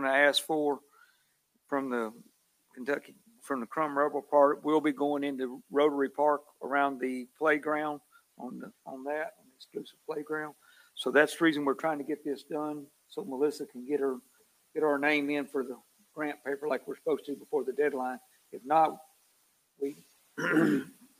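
Nothing in the audio stood out as a technical problem on listening.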